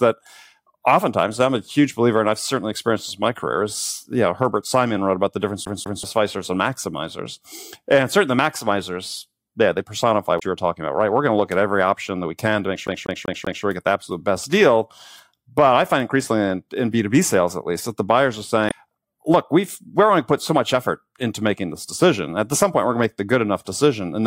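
At 5.65 s the CD gets stuck on one turn: a scratch knocks the laser back a track each revolution, so a 192 ms slice of speech plays twice with clipped mutes at each jump, ending at 6.03 s. At 10.36 s damaged data in the compressed stream makes the decoder lose frame sync and hunt for the next header, leaving a brief glitch through 10.43 s. From 12.87 to 13.64 s the same disc fault returns, with the 192 ms loop repeating four times in a rapid, even stutter.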